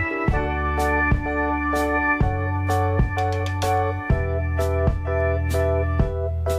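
No technical faults detected.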